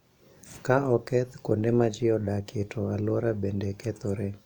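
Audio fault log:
No faults found in this speech recording.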